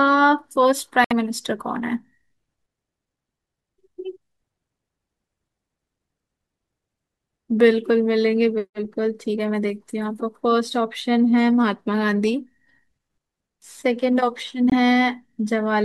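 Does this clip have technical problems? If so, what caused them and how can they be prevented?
Yes. Corrupt frame muting cuts the speech at 1.04 s for 78 ms and at 14.70 s for 36 ms. Damaged compressed frames were rejected by the decoder. Silence replaced them, so each gap starts abruptly. Error-checked transmission with retransmission or forward error correction would prevent this.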